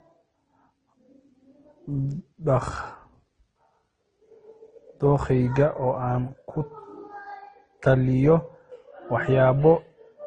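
From start to finish the speech carries two layers of coding damage at once: smeared, swirly high-frequency texture alongside a watery, metallic graininess, with nothing above 9.7 kHz. This is likely transcoding between lossy codecs, the pattern pointing to a low-rate MP3 stage followed by Opus at a lower rate, the second encoder spending its scarce bits on the first one's artefacts. A spectrogram shows a hard ceiling at 9.7 kHz and patchy, blocky gaps in the upper bands.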